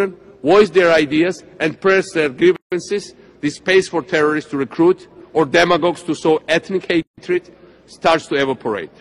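At 2.56 s the sound drops out for about 156 ms, resuming at 2.72 s, and again from 7.02 to 7.18 s for about 154 ms: a gap at a join of encoded pieces. Separately encoded segments were butted together with their encoder start delay and final-frame padding left in, so silence splits continuous sound, which then continues exactly where it stopped. The waveform shows flat stretches with sharp, slightly softened edges; the spectrogram shows clean vertical blank bands.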